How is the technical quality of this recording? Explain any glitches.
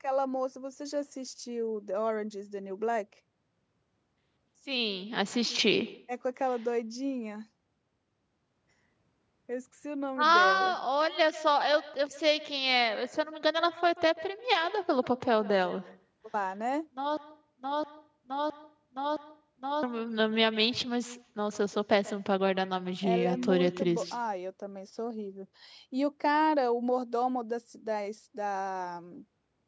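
The recording has two clear faults: a constant echo from the far end and a stretch where the audio sticks and repeats. The sound stops at 8 kHz, which is ordinary band limiting from the call's microphone processing.

Echo with no canceller runs through the whole clip. The far end's loudspeaker feeds its microphone, and nothing removes that path, so every phrase returns roughly 150 ms later, about 19 dB quieter and thinner. Unlike room reverb, it is a distinct delayed copy, not a smooth decay.

A broken-record loop runs from 17.17 to 19.83 s. A 0.66 s fragment plays four times back to back, identical each time, and the audio meant for that span is lost. The likely cause is a stalled player, encoder or stream resending its last buffer. Exact repetition distinguishes it from echo, which fades and overlaps.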